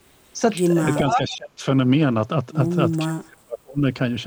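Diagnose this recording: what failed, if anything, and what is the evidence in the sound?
Speech suppressed in double talk, 1.16 to 1.65 s and 3.05 to 3.82 s: the speech sinks by roughly 40 dB and then about 35 dB, for about half a second and about 0.7 s. This is call processing, likely an echo canceller muting its own talker while the far side spoke.

Echo leak, 1.31 to 1.37 s: a short, faint copy of the speech returns 460 ms late, roughly 25 dB under the direct sound. This is also call processing, likely a loudspeaker-side echo canceller letting residual pickup back into the send path.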